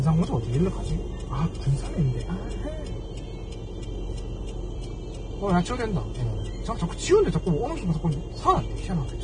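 From start to finish the audio carries Vorbis compression damage, likely from heavy encoding at a rate that fits roughly 23 kbps. Nothing survives above 9.7 kHz. The treble is quantised coarsely into hiss and grain. Tones sound roughened and attacks blur.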